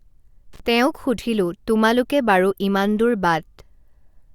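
At 0.53 to 0.60 s, an intermittent contact drops the speech for about 41 ms. A loose connection briefly opens, crackling at both edges, just before "তেওঁক সুধিলোঁ তোমালোকে বাৰু".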